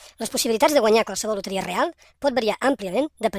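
From start to finish the speech runs at the wrong sample rate: it plays about 1.45 times too fast and sits about 6.45 semitones high, which fits 22 kHz material played back at 32 kHz without conversion. Speed and pitch shift together, so voices sound hurried and squeaky.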